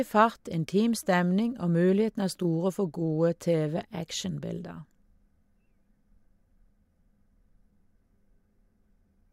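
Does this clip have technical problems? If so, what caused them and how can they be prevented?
No, this clip has no technical problems, so there is no cause to identify or prevent.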